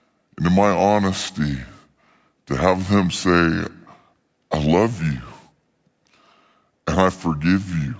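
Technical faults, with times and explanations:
Throughout: wrong sample rate. Everything runs slow and sits low at once, at about 0.73 times normal speed and roughly 5.5 semitones flat. That locked pairing of tempo and pitch means the samples are being clocked out slower than they were captured, with no resampling in between. The ratio fits audio made at 22 kHz being played back at 16 kHz, so every sound in the clip comes out dragged and deepened by the same amount.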